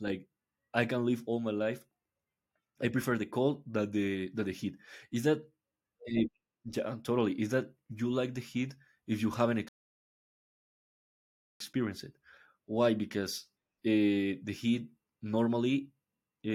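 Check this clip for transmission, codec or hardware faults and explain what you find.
One transmission fault stands out: a rebuffering stall from 9.69 s to 11.60 s. The speech stops dead and goes silent for about 1.9 s, then picks up at exactly the point where it broke off. The player used up its downloaded audio and had to wait for more to arrive, so nothing is skipped but the clip runs longer. A waveform shows a flat gap, and a spectrogram shows a blank band with sharp edges on both sides.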